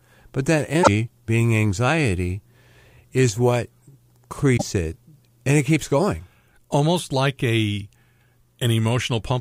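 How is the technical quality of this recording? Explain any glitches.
Two brief glitches interrupt the speech. From 0.80 to 0.88 s, between "but that" and "being anxiety", and from 4.53 to 4.62 s, just before "it and it keeps", a short glitch cuts in. Both come from damaged data in a compressed stream: corrupted bytes make the decoder misread those frames and lose sync until it finds a valid frame header again.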